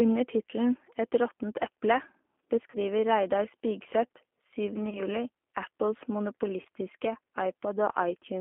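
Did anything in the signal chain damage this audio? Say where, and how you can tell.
Yes. At the codec stage, the whole clip has been through a narrowband CELP speech codec, plainly audible as G.729 codec damage. The speech sits in a line band of 250 Hz to 3.4 kHz, with nothing above it, and has the slightly rough, synthetic texture of a low-rate coder. That fits G.729A at 8 kbit/s, which rebuilds each 10 ms frame from a vocal tract filter, a pitch predictor and a few pulses rather than the actual waveform.

On the network side, there are three dropouts handled by VoIP packet loss concealment in the speech codec: 2.70 to 2.78 s, 4.90 to 5.02 s, and 6.61 to 6.67 s. The first and last cover about 40 ms of missing audio each, consistent with two consecutive 20 ms packets, and the middle one about 20 ms, consistent with a single packet. In each case the decoder extrapolated from its last pitch and filter, stretching the sound into a buzzy tone or coloured noise that fades. 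Because each frame builds on the previous one, the weakened, distorted sound persists briefly after the packets resume.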